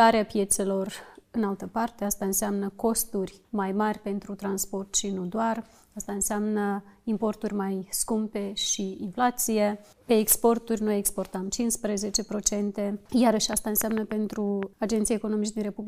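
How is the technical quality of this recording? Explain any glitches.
One glitch stands out near the end. From 13.53 to 14.64 s there is a train of clicks: about seven similar pops at uneven spacing, roughly 4.6 per second, peaking around 15 dB above the sound. The likely cause is external interference or a faulty connection injecting pulses. They appear as sharp waveform spikes and thin vertical broadband lines on a spectrogram.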